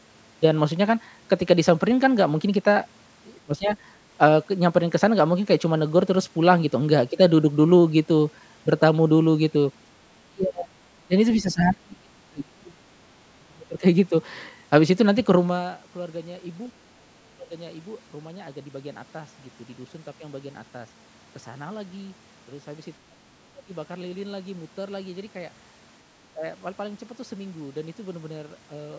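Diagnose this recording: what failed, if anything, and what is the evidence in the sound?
Speech suppressed in double talk, at the call-processing stage: the speech dips or breaks up at 3.45, 10.3, 11.07, 11.41 (longest, over a second), 13.38, 16.69, 22.99 and 26.34 s, dropping roughly 15 to 35 dB. The likely cause is an echo canceller mistaking overlapping near-end speech for echo and attenuating it.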